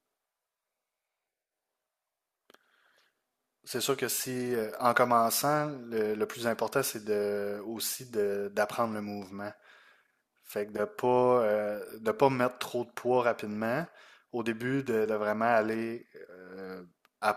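A speech recording with no technical faults to report. Nothing in the audio stands out as broken at any point.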